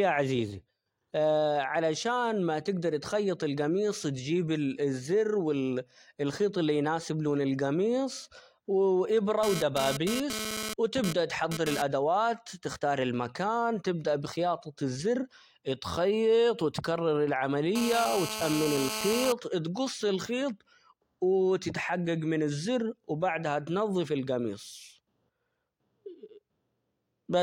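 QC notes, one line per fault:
9.43–11.82 s, GSM phone buzz: a nearby 2G handset exchanging data transmits in bursts about 217 times a second. The audio circuitry rectifies each radio pulse into a click train, so a hard, raspy 217 Hz buzz with dense harmonics comes and goes over the speech, peaking about 6 dB below it.
17.76–19.32 s, GSM phone buzz: the handset is now holding a call, so its 217 Hz bursts run unbroken. The rectified interference becomes a steady harsh buzz about 6 dB under the speech, unrelated to the speech's pitch.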